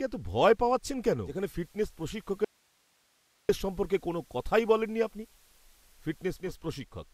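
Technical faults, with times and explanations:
1.22 to 6.54 s, digital radio blending to analogue: the receiver loses the digital stream and cross-fades over roughly 0.2 s to the FM broadcast of the same station, then blends back at 6.54 s. Level stays put, and a light hiss sits something like 35 dB under the speech for the whole stretch. That's the analogue path showing through.
2.45 to 3.49 s, audio dropout to a faint residue: the speech cuts out abruptly for just over a second, then snaps straight back mid-flow rather than easing in. The gap isn't silent. It holds hiss roughly 40 dB below normal level, so the chain after the break was still live and passing its own noise. A brief loss of the wanted signal is the likely cause.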